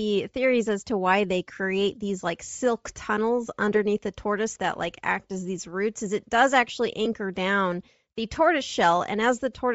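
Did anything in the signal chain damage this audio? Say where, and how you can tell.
Yes. The damage happens at two stages.

At the codec stage, the speech has a breathy, grainy edge throughout the whole clip. The damage is plainly audible. It sounds like Bluetooth LC3 compression, most likely at a low rate that fits about 32 kbps with 7.5 ms frames. At that rate the encoder drops much of the upper spectrum. The decoder then fills those empty bands with noise, which causes the grain.

At the wireless link stage, there is a brief noisy smear at 7.05 s. It falls between "is it does actually" and "down the tortoise". This is a case of lost LE Audio frames. The gap lasts about 7.5 ms, which fits a single lost frame. The LC3 decoder covers the gap by reusing the last spectrum with random signs, so the smear sounds like noise. The loss is too short for any fade toward silence.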